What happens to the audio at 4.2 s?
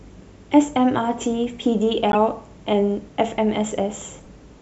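A corrupt frame decoded at 4.21 to 4.27 s, roughly 60 ms, breaks into the speech there. Damaged bits in a few consecutive compressed frames, about three, went through the decoder unrejected, so misread gain values and spectral codes placed energy at frequencies where none belonged. The result is a short, fairly quiet chirp or blip of noise, peaking somewhere near -35 dBFS, lasting just the span of those bad frames before clean decoding resumes.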